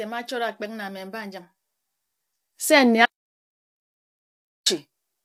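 From the start the speech carries plainly audible low-delay AAC compression, rough and grainy, most likely AAC-ELD at a rate near 32 kbps. Its short frames blur pitch harmonics, so a spectrogram shows smeared harmonic lines, noise filling the gaps between them, and a thin, artificial-looking top band.

At 3.06 s the audio drops out to complete silence until 4.66 s, about 1.6 s lost with no room tone at all. The waveform is a flat line and the spectrogram a blank gap; the input itself was likely lost, through a disconnect or mute.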